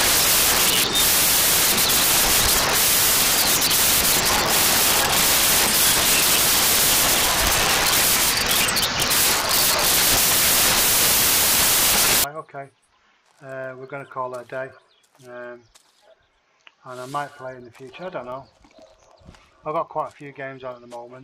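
From the start until 12.24 s the audio is loud, harsh broadband noise. These are samples built from the wrong bytes: misaligned or swapped bytes let the rapidly changing low bits dominate each value.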